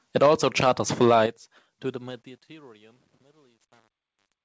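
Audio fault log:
1.0 to 1.22 s, microphone overload: The loudest syllables here take on a harsh, crackling edge because the waveform tops are flattened at the converter ceiling, roughly 3 dB past it, with a few percent of samples pinned flat. The likely cause is an input volume set too high. Unlike the gritty texture later in the clip, this distortion appears only on the peaks. Quieter sounds in the same stretch stay clean, and the level does not fall away.
1.26 s, microphone volume stepped down: Just after the crackling peak, the voice and the background drop together by about 8 dB in a single instant, with no ramp. This pattern likely comes from call software reacting to the overload and cutting the microphone's input volume. A fade glides down gradually, while this change happens in one step, and the room noise drops by the same amount as the voice. That shared drop points to the input stage and not to the talker moving away.
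1.9 to 4.45 s, truncation distortion on a fade: The fade-out, which starts around 2 s, should thin away smoothly. Instead, as the level sinks, the sound turns gritty and grainy. From about 2.43 s to the end the grit is at its worst. This fits a fade computed at roughly 9-bit resolution with no dither, so the quiet waveform collapses into a few coarse steps. Codec noise would stay at a steady level, while this grit grows worse as the signal gets quieter.
3.6 s, microphone volume stepped up: In the middle of the fading tail, the voice and background jump up together by about 12 dB in one step, with no ramp. This happens when call software judges the microphone too quiet and raises its input volume. A natural swell in loudness would build over syllables, while this jump is instantaneous and lifts the noise floor too.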